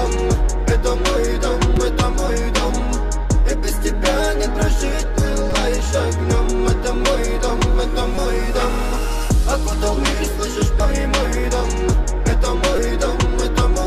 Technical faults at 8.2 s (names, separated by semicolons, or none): damaged data in a compressed stream